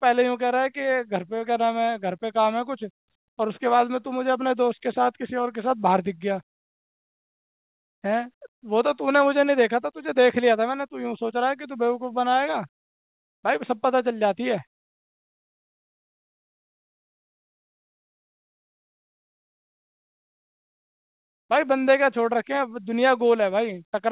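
Nothing goes wrong anywhere in this speech, which arrives over a call connection with nothing above 4 kHz, just what you'd expect from a narrowband G.711 mu-law link running at 64 kbps.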